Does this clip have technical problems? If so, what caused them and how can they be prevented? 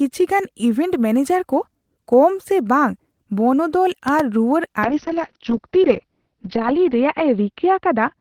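Yes. At 4.08 to 4.22 s a loud pop lands on top of the speech as two sharp thumps in quick succession, peaking about 10 dB above the voice, while the speech carries on underneath. This is likely an electrical transient such as a cable being touched, a switch toggling or a static discharge, injecting a brief voltage spike that the following circuitry shapes and lets ring for a moment. Securing connectors and avoiding switching or handling gear while recording prevents it.

From 4.85 s to the end, the speech turns rough and muffled in a call bitrate drop. The treble vanishes as the audio bandwidth shrinks from 20 kHz to about 6 kHz, and the coarse, watery texture fits an encoder rate falling from around 32 kbps to about 7 kbps, staying at its worst for about 1.95 s. The call's bandwidth estimate collapsed, so Opus was told to spend far fewer bits. A stable, uncongested network connection prevents it.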